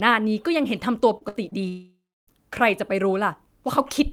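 From 1.17 to 1.56 s, repeated packet loss makes the speech choppy and robotic. The spectrogram shows smeared, repeated slices and holes up to 58 ms long.

From 1.68 to 2.29 s, a fading buzz gives way to about 300 ms of flatlined waveform, likely a long network dropout, before speech resumes.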